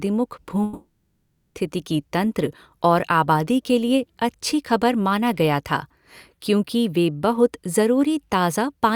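A long network dropout runs from 0.63 to 1.57 s, likely caused by a stretch of packets that never reached the receiver. The speech stops mid-flow and about 0.92 s of it is lost outright. The receiver fills the entire gap by extending the last sound it had into a buzzy, hissing smear that fades away without ever falling to true silence. Speech then resumes at "तंत्र और", with the missing portion simply gone.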